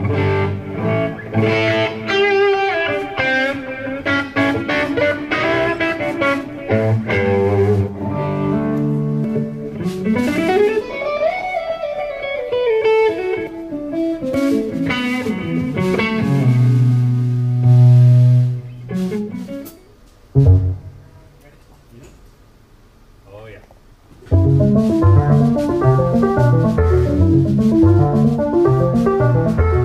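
No technical faults can be heard anywhere in the audio, and the signal holds steady with no interruptions or disturbances.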